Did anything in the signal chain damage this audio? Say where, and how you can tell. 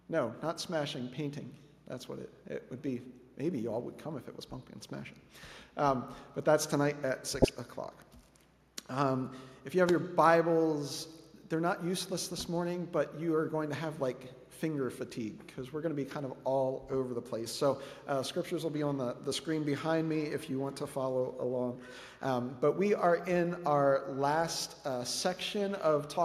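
Yes. DAB burbling appears at the codec stage, from 7.42 to 7.49 s. A small residual bit error rate in weak reception let errors through into the MP2 data, corrupting samples across what sounds like a handful of frames. Wrong samples put short blips of noise into single sub-bands, giving a brief burbling over the audio.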